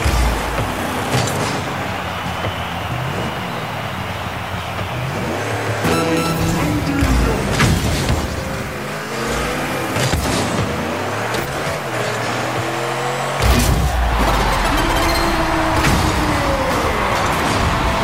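A harsh, buzzy distortion runs through the whole clip, and the quiet passages never go silent but carry a steady noise floor that sits around -40 dBFS. The likely cause is a stuck bit, one data bit held at a fixed value so that roughly half the samples are shifted by that bit's weight. Unlike clipping, the damage does not depend on loudness, and unlike coarse quantisation, the gaps fill with noise instead of dropping to silence.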